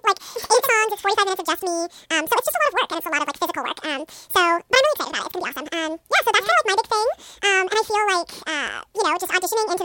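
From start to finish the speech suffers from audio read two samples at a time (double speed). Pairs of samples are taken as single frames, so playback runs at 2.0 times speed and an octave high.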